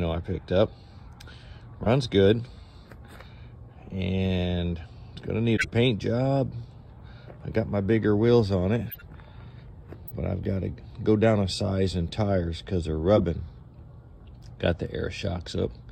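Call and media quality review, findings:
Corrupt frame decoded: bit errors in compressed frames were decoded and played anyway, putting energy at the wrong frequencies. The result is brief chirps and noise bursts at 1.84–1.87, 5.56–5.69, 6.99, 8.89–9.02, 10.08–10.11 and 13.16–13.24 s. They are loudest near 5.6 and 13.2 s and faint at 6.99 s.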